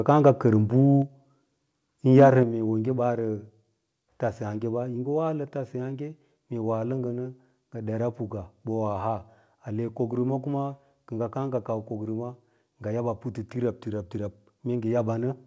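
A speech recording carried over a call link, band-limited with nothing above 8 kHz, which fits a wideband codec such as G.722. At 1.02 s the whole signal, voice and background together, drops by 3 dB in a single step. The same happens again at 2.43 s, this time by about 5 dB. These are microphone volume stepped down events. The likely cause is the call software's automatic gain control cutting the device input level at once rather than ramping it. Between 2.19 and 2.27 s there is microphone overload. The peaks run about 3 dB past the converter's limit and their tops are flattened, with a few percent of samples clipped. This gives the loudest syllables a harsh, crackling edge. The input gain set too high ahead of the converter likely explains it. The second step-down follows this distorted burst closely, consistent with the software reacting to the clipping.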